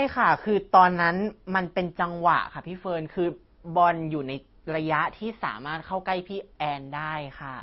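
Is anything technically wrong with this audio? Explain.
Yes. Throughout the speech there is a layered coding degradation, likely from transcoding between lossy codecs: an MP3 pass near 34 kbit/s followed by an Opus pass near 32 kbit/s. The second encoder spends its small bit budget reproducing the first one's artefacts, then adds its own quantisation texture, so two kinds of artefact sit on top of each other. Nothing remains above 19.4 kHz, the lowest cut-off surviving the chain.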